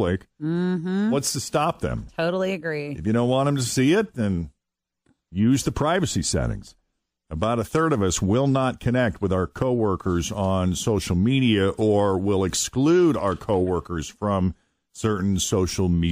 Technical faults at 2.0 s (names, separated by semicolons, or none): none